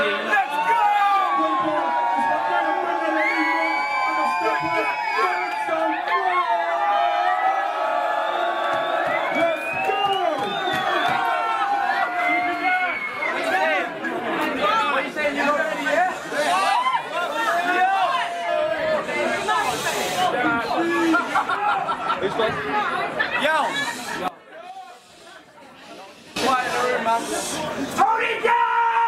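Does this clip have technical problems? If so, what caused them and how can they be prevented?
Yes. Compressed frames skipped at 1.00, 2.60, 14.04, 16.75, 18.47 and 21.48 s: runs of 21.3 ms frames, about 40 to 300 ms, vanish. Each shows as a jump ahead and a waveform discontinuity. Check files and transport for corruption.

From 24.28 to 26.36 s the mono level drops about 19 dB, leaving a faint residue and a near-empty spectrogram, likely one channel inverted. Verify channel polarity before downmixing.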